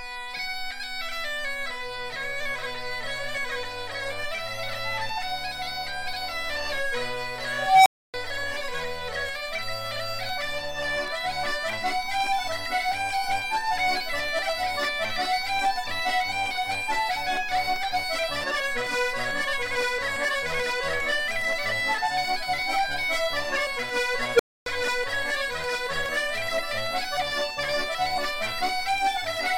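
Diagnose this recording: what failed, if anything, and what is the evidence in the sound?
An unstable filter in a digital processing stage: at 7.58 s a tone around 700 Hz swells over 274 ms, clips, then drops to 280 ms of silence. At 24.35 s a tone around 500 Hz grows in 43 ms before 270 ms of silence. A recursive filter with bad coefficients fed its output back with gain above one until it overflowed and reset. On a waveform, a rapidly widening envelope clips, then flatlines. A spectrogram shows a bright horizontal line, then a blank gap.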